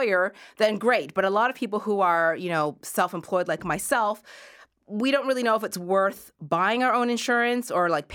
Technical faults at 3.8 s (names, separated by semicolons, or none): none